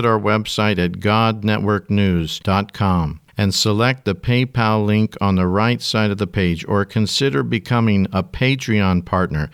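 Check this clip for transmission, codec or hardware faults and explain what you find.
No transmission, codec or hardware fault can be heard in this speech recording. The whole recording was checked, and nothing in it calls for further explanation.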